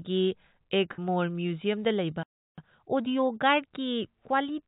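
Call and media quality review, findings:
Burst of packet loss, 0.93 to 0.99 s. About 50 ms of speech missing; the receiver's concealment held the last sound for roughly 46 ms and faded it, leaving a short buzzy or hissy smear before speech resumes further along. Jitter buffer or network side, on a narrowband path with nothing above 4 kHz, which fits G.711 A-law at 64 kbps.

Playback stall, 2.23 to 2.58 s. Output drops to silence mid-phrase for about 347 ms, then speech continues. Likely the player starved of data or had its audio thread blocked, so nothing reached the output until it recovered.

Time-compressed catch-up, 2.58 to 3.26 s. Speech runs at 1.5x with pitch unchanged. The player is cutting out small slices and cross-fading the joins to drain the backlog built up during the stall.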